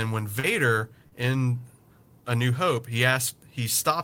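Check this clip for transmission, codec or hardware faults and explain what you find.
Two short concealed packet losses, at 0.39–0.46 s and 1.07–1.14 s. Each time, about 40 ms of the call's speech arrived too late to decode. The receiver bridged the gap by extending the preceding sound, then blended back, leaving a brief smear or wobble.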